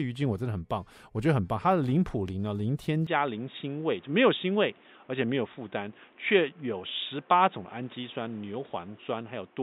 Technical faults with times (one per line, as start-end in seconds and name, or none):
3.07-9.62 input switched to a poorer device